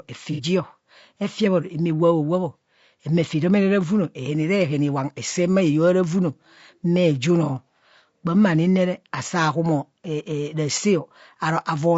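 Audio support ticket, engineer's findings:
Rough, grainy speech throughout, noise between harmonics, synthetic top band. Likely low-delay AAC compression (AAC-ELD); short frames smear pitch harmonics at what sounds like around 32 kbps.

Smeared, noisy patch 0.32–0.41 s. AAC frame loss with concealment: decoder rebuilt about 60 ms from the last good spectrum, consistent with two lost frames.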